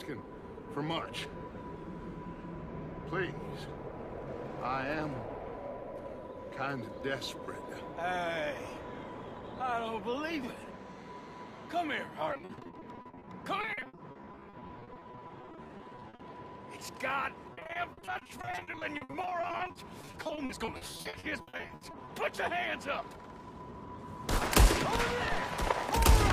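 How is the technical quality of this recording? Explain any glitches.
The recording has two stretches of repeated packet loss, heard as a robotic sound, from 12.33 to 16.21 s and from 17.53 to 22.09 s. In each stretch, dozens of short gaps, none longer than 60 ms, are filled by extending the sound that came just before. About a third of each span is patched this way. Because the holes come in quick succession, the result is choppy, with pieces missing. A single dropout would leave one isolated gap instead.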